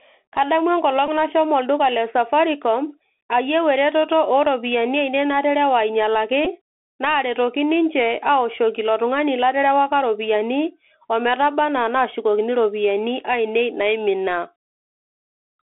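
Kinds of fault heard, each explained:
Bluetooth CVSD headset codec: Throughout, the speech is confined to a 300 Hz to 3.4 kHz line band. The 64 kbps one-bit delta coder's adaptive step can't track sharp high-frequency energy, so s sounds turn scratchy over a plainly audible granular hiss.
Bluetooth headset packet repeated: At 1.07 to 1.09 s and again at 6.45 s, lost headset packets were filled by replaying the previous packet's bits. Each 11.2 ms gap fits about three 3.75 ms packets, giving a brief buzzy blip rather than a sustained tone.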